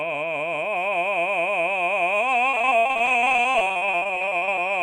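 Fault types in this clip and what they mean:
Repeated packet loss (robotic sound): from 2.49 to 4.69 s the music breaks into dozens of brief holes, none longer than 58 ms, each patched by stretching the preceding sound. About 41% of that stretch is concealment rather than real signal, giving a choppy texture with pieces missing. Unlike a single dropout or a one-off concealed gap, the holes recur in rapid succession, so the smearing persists for over two seconds instead of a single blip.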